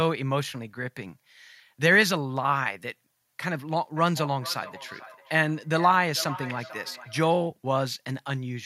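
From 3.97 to 7.39 s, the speech is followed by a trailing repeat. This is feedback echo between two devices. Two devices sharing the call sit in the same room. One plays out what the other captured, and that microphone hears it again. Each device's echo canceller removes only its own playback, so the loop survives. The repeat returns roughly every 0.4 seconds. At its loudest it sits about 14 dB below the speech.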